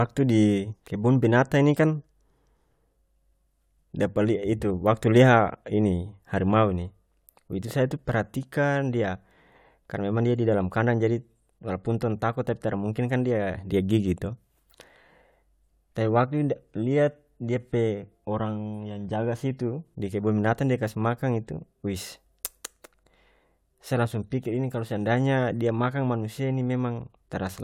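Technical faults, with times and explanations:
Nothing technical to flag here; the speech comes through without any glitches or problems worth noting.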